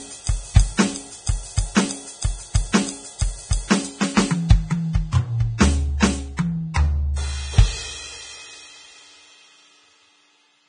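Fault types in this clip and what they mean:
Vorbis compression: grainy, hissy treble with roughened tones and smeared attacks, nothing above about 9.7 kHz, likely from heavy Vorbis coding near 23 kbps.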